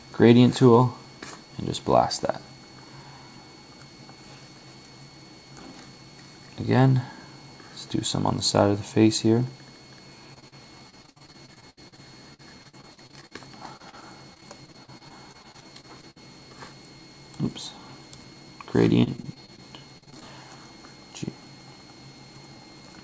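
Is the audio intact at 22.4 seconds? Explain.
Yes, the audio is intact at 22.4 seconds, with nothing there beyond the ordinary narrowed sound of a call path whose content stops at 8 kHz, which fits a G.722 codec.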